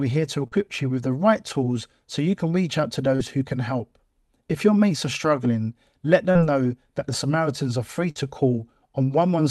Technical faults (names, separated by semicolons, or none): short concealed packet loss; burst of packet loss